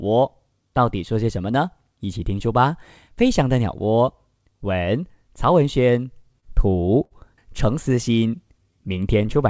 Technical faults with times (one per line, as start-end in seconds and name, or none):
6.22-7.13 repeated stalls (stutter)
7.89-9.34 jitter buffer slow-down